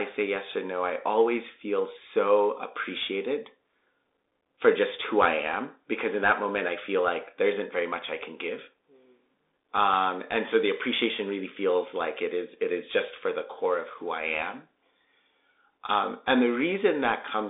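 Bluetooth CVSD headset codec throughout this speech: one-bit delta coding confines it to roughly 300 Hz to 3.7 kHz, with nothing above 3.8 kHz, leaving scratchy sibilants and granular hiss.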